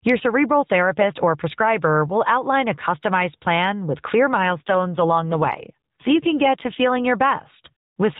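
From 4.42 s to 7.05 s, just after "customized plan with clear", an AMR rate drop makes the speech rougher and more synthetic, with no gap and the same narrowband 4 kHz ceiling. The added coarseness fits an AMR-NB mode switch from 12.2 to 5.9 kbps.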